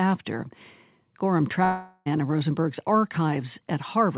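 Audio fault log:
1.64–2.08 s, long network dropout: about 0.42 s of sound is lost, likely from packets failing to arrive. The receiver fills the gap with a buzzy, fading continuation of the preceding sound. A spectrogram shows smeared, repeating harmonic bands thinning out below the 4 kHz call-band ceiling, then an abrupt resumption.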